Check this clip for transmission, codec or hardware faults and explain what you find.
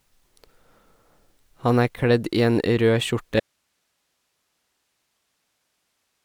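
There is one fault, an audio dropout to a faint residue. At 3.40 s the speech cuts off abruptly and never returns. Only hiss remains, far below the speech level. The likely cause is the wanted signal being lost upstream while the downstream path stayed live and passed its own noise floor.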